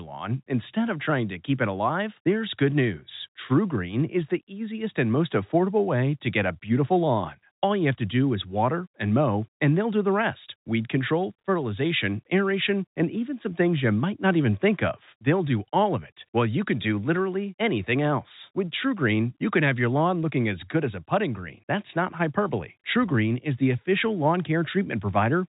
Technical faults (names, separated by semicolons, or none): none